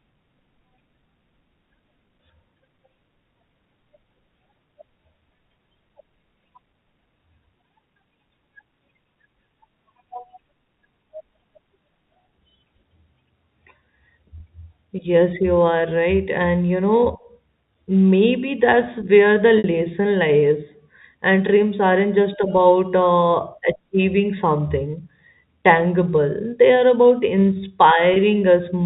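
At 14.38 s and again at 28.14 s, the speech holds for about 20 ms on a slightly buzzy, sustained tone. This is packet loss with pitch repetition: each gap fits one lost 20 ms packet, and the receiver filled it by looping the last pitch period. At 19.58 s a longer 60 ms loss lets that looped buzz fade toward silence before the speech cross-fades back in by 19.64 s, under the band-limited sound of the G.711 telephone path. A plain dropout would leave a hard silence or a click. Here the gap is filled by a smooth, tonal hold.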